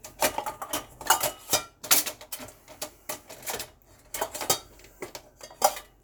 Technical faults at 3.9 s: none

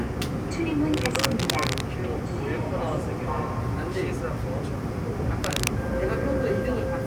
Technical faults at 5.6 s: cable scratch noise

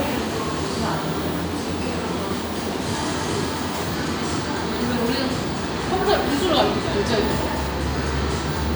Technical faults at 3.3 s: none

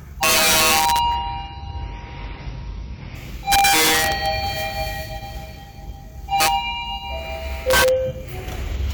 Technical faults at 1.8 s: adaptive stream at a lower bitrate; CD scratch ticks

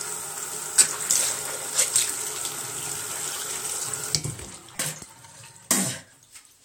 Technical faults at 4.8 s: repeated buffer

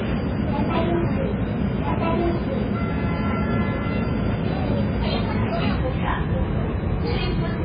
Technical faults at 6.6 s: MP3 compression

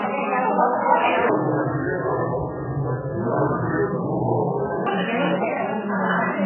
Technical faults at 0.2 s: transcoding between lossy codecs

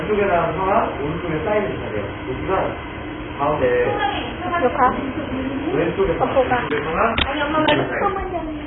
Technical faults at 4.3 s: AAC compression

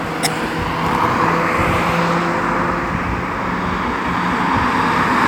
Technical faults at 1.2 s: none

